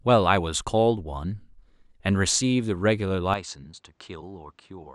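At 3.34 s the speech turns duller and a few decibels quieter through to the end at 4.94 s, with nothing above 8.6 kHz and a faint new noise floor well underneath. With no gap at the change, this is likely an input switched to a poorer device, whose narrower band and own tone replace the original microphone.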